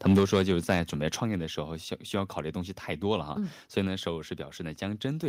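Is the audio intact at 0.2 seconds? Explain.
No, right at 0.19 s there's a microphone volume stepped down event: the speech and the background both drop by about 4 dB in one sudden step. The likely cause is the call software lowering the mic's input volume after judging it too hot.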